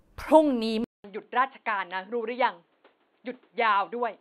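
At 0.84 s this speech recording drops out for 200 ms. It comes back duller and about 10 dB quieter, with nothing above 4.4 kHz and a new noise floor some 40 dB down. The gap and the changed noise point to a likely input switched to a poorer device, not a plain low-pass filter.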